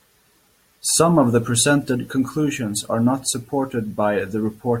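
Nothing in the speech recording stood out as a technical problem on listening.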